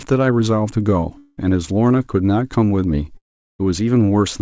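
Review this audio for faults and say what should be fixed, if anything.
Two long network dropouts, likely from packets lost in transit, left the receiver with nothing to play from 1.18 to 1.39 s and from 3.17 to 3.61 s. Each gap is bridged by a fading buzz that carries the last sound forward. The second one decays into silence before the speech returns with a piece missing. Throughout, the call codec's band stops at 8 kHz.

To prevent this, stabilise the network link and enable forward error correction or redundancy on the audio stream.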